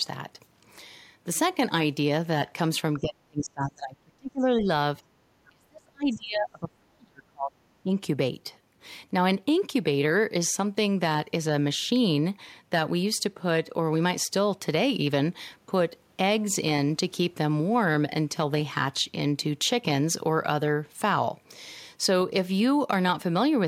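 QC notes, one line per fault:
2.99–4.67 s, 5.11–7.6 s, 7.83–7.92 s: speech suppressed in double talk. The speech sinks and breaks up in patches, down about 35–40 dB in the first two stretches and about 15 dB in the short last one, likely an echo canceller ducking everything while both ends talk.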